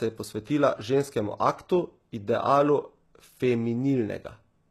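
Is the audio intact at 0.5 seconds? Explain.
No. At 0.5 s, as throughout the clip, the speech carries plainly audible damage, likely from HE-AAC compression at a rate that points to roughly 16 kbps. Only the lower band is truly coded; the treble is rebuilt by copying lower bands upward under a coarse envelope, so s sounds turn gritty and lispy. On a spectrogram the upper band shows repeated, blocky patterns that don't line up with the harmonics below, and nothing appears above 12.3 kHz.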